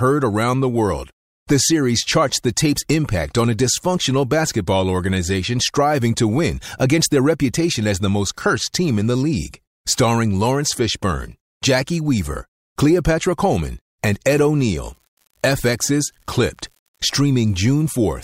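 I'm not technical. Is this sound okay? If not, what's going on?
No, not quite. From about 14.59 seconds to the end, there's an unreliable data bit: one line carrying the digital audio is flaky, so random samples get the same small jolt. You hear it as a steady fizzy crackle that carries on even in the pauses.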